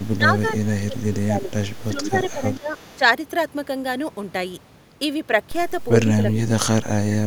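From 0.00 to 0.13 s a faint echo leak trails the speech by 383 ms, about 30 dB down. It returns from 0.86 to 1.85 s and from 2.24 to 2.98 s, about 25 dB down. The fixed 383 ms lag sets it apart from room reverberation, which smears continuously. It is likely residue that the far end's echo canceller failed to remove from its loudspeaker pickup.

Overlapping this, from 0.15 to 3.03 s, the speech is suppressed in double talk. For about 1.5 s in total, the level dips by up to roughly 20 dB. The same happens from 5.95 s to the end, with roughly 0.7 s affected and dips of up to about 30 dB. The cause is likely an echo canceller turning everything down while both sides talked at once. Unlike a network dropout, these are gain dips that track the overlapping talk.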